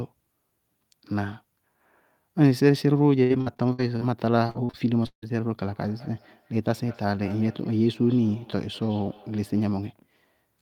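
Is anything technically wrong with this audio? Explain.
Yes. Repeated packet loss (robotic sound) from 3.23 to 4.03 s and again from 4.47 to 5.24 s: lost audio is patched by stretching the last sound, giving choppy speech with gaps up to 158 ms. Feedback echo between two devices from 5.59 to 9.85 s: a second device replays the speech into the microphone, so it returns roughly every fifth of a second, faint at about 26 dB below the speech.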